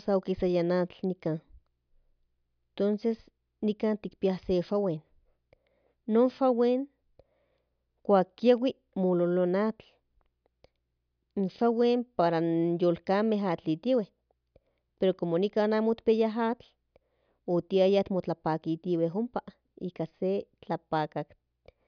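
A speech recording with no technical fault to be heard. There is nothing in it that calls for a time or a cause.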